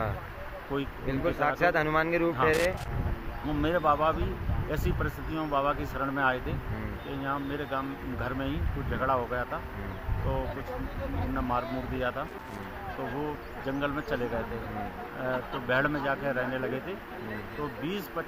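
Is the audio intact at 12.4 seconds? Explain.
No, 12.4 s falls inside a burst of loose connector crackle from 12.28 to 12.64 s. A worn contact keeps making and breaking, so the signal is chopped into irregular scratchy crackle.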